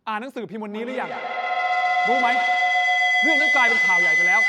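From 0.72 s on, a tone near 2 kHz swells, throbbing every 150 ms or so: feedback howl, a microphone-to-loudspeaker loop gaining level each pass.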